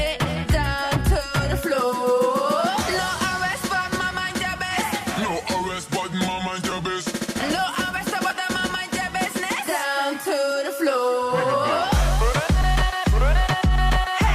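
The audio has three brief dropouts from lost LE Audio frames, at about 6.70 s, 8.29 s and 12.62 s. The first two each span about 15 ms and the last about 7.5 ms, which fits one or two lost 7.5 ms LC3 frames. The decoder fills each gap by repeating the last spectrum with randomised phase signs, so tones blur into a short noisy smear. On a spectrogram this shows as a thin vertical band of smeared energy. On the waveform it shows as a brief patch of noise-like ripple. The light lossy compression underneath leaves only a faint trace.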